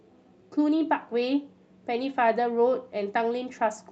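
No faults are audible in this speech; the top end stops near 8 kHz, which fits an Opus call path running at wideband.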